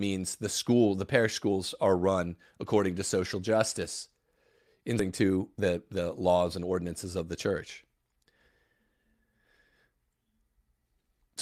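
Right at 4.99 s there's a skip ahead: something like 0.7 s of speech just isn't there, and the audio on either side butts straight together with no gap. Probably the receiver dumped a chunk while newer audio was already queued behind it.

Then from 5.23 to 7.24 s, just before "the church", the jitter buffer speed-up kicks in. The receiver keeps snipping out tiny pitch-period slices to drain the backlog, about a third of a second in all, so the speech runs at 115% with unchanged pitch and sounds a bit rushed.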